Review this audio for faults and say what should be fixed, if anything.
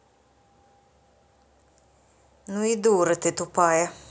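Automatic gain rising runs from 2.32 to 4.0 s: the gain control judged the input too quiet and raised its gain by about 6 dB over that stretch, so the speech and the background swell together. The call microphone processing's 8 kHz upper limit is normal. To prevent the swell, set a fixed input level or slow and cap the gain control's upward adjustment.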